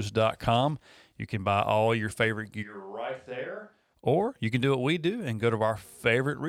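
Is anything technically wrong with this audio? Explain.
Yes. From 2.64 to 3.93 s, after "buy all your favorite" and until "or you can do", there is a switch to a distant microphone. The speech abruptly turns roomy and hollow, loses bass, and drops about 10 dB, with room noise about 40 dB below it. This is likely because the close microphone dropped out and a farther one took over. The waveform steps down sharply at both edges, and the spectrogram shows thinner low frequencies and smeared reverberant tails.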